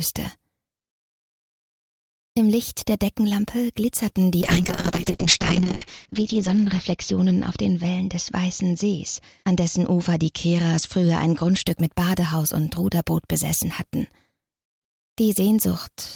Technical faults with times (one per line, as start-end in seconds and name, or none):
4.43-11.71 call bitrate drop